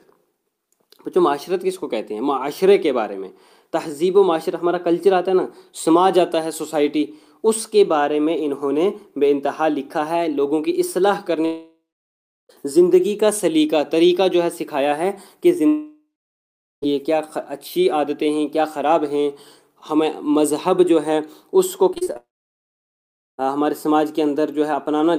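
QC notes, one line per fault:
11.45–12.51 s, long network dropout: about 1.04 s goes missing. The last sound smears into a fading buzz, then roughly 0.7 s of silence before audio resumes, likely from a network stall.
15.67–16.84 s, long network dropout: about 1.16 s lost this time. Same fading fill-in, then around 0.77 s of silence before it picks back up, likely a network dropout.
21.94–22.17 s, repeated packet loss (robotic sound): five quick holes, the longest 32 ms, each patched by stretching the previous sound. Nearly half the span is fill-in, so it turns choppy.
22.17–23.44 s, long network dropout: straight after the choppy bit, about 1.22 s disappears. There is a brief smeared tail, then about 1.14 s of silence, likely a full network outage.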